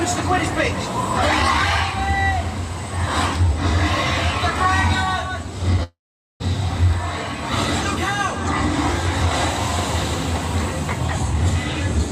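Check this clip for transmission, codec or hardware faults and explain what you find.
One transmission fault is audible. From 5.83 to 6.42 s there is a long network dropout, likely caused by audio stopping in transit. The last sound smears into a fading buzz before near-silence, and about 0.4 s is lost outright, longer than a brief packet-loss blip.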